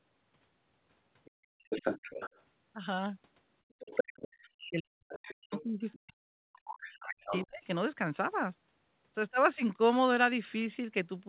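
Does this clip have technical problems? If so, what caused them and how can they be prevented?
Yes. Other side's voice leaking through: a second voice sounds at 1.25–1.31 s very faintly, then at 1.64–2.41 s and 3.79–4.28 s nearly as loud as the talker, and at 5.08–5.97 s and 6.65–7.67 s somewhat quieter. On a spectrogram it appears as a second, overlapping harmonic pattern. The likely cause is loudspeaker playback reaching the microphone and not being fully cancelled. Using a headset, or lowering speaker volume and moving it away from the microphone, prevents this.

Background gated by the echo canceller: the room sound drops by about 30 dB at 1.31–1.64 s and about 27 dB at 3.63–3.79 s. The waveform shows flat, near-empty gaps where the canceller clamped the microphone. A better-tuned echo canceller with gentler suppression and comfort noise avoids these holes.

Speech suppressed in double talk: from 4.4 to 7.63 s, while the other side speaks, the talker's voice dips sharply, by roughly 40 dB at worst. 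The waveform shows a shrinking envelope. The likely cause is an echo canceller unable to separate near speech from echo. A full-duplex-capable canceller and a headset keep both voices intact.

The 4 kHz band limit of the 64 kbit/s G.711 call path is normal for that codec.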